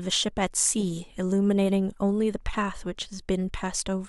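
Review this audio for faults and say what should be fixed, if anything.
Nothing stood out on listening, so there is nothing here that needs fixing.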